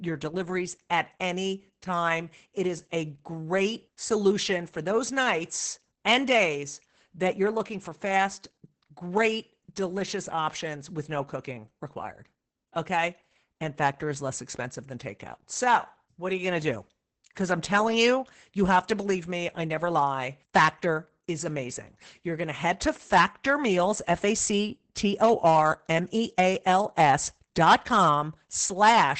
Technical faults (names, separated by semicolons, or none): Opus voice compression